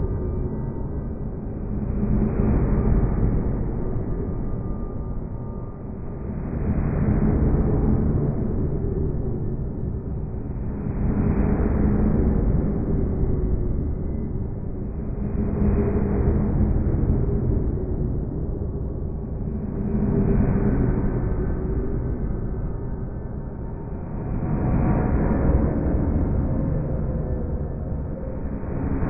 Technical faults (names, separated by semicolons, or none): none